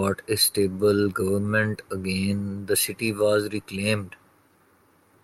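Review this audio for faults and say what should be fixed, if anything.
Nothing to fix; no faults are audible anywhere in the speech recording.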